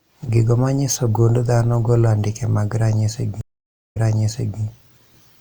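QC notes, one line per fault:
3.41–4.61 s, stream reconnect: the speech drops to silence for about 0.52 s, then resumes roughly 0.68 s earlier, repeating a stretch. The connection broke, and the player reconnected and restarted its decoder mid-stream while the server resent a burst of audio.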